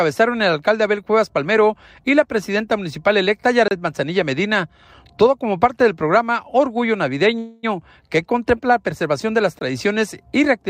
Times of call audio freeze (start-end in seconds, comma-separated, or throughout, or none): 7.38-7.65